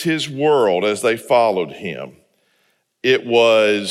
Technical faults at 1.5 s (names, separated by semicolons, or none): none